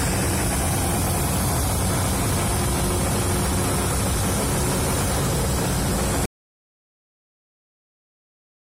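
Audio dropout to silence at 6.26 s: the sound cuts off abruptly and stays silent, with no room tone, for the final 2.5 s to the end. The input was likely lost, leaving the recorder writing silence.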